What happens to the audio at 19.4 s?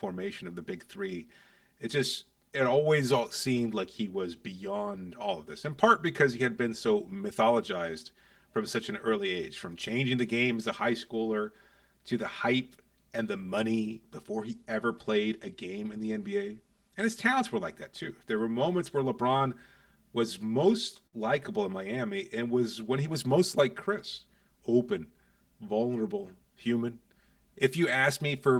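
At 19.37 to 19.42 s the speech catches on a short stall from a late packet. A packet arrived behind schedule, the jitter buffer ran dry, and the receiver held the last sound for about 30 ms until the packet came in, then resumed from the same point. The sound is briefly drawn out with a slight buzz or dip. Unlike a dropout, nothing is skipped, and the timing afterwards runs about 30 ms later than before.

The same moment, like the whole clip, also carries channel delay (comb filtering). One channel lags the other by roughly 5 ms, and when the two are summed to mono, shared content cancels at evenly spaced frequencies starting near 100 Hz. That gives the speech a steady hollow, phasey colour. This differs from room reverberation because it adds no tail or decay. It differs from codec smearing because the notches stay fixed rather than shifting.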